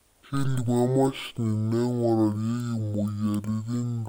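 Speech runs throughout at half speed and an octave low, a drop of 12 semitones. The fault is stereo read as mono. The left and right samples alternate in the file, and they have been played back one after another as a single channel. Every original sample pair now takes two sample periods, so the timing stretches and the pitch falls. A fainter mirrored copy of the sound also sits in the upper half of the spectrum.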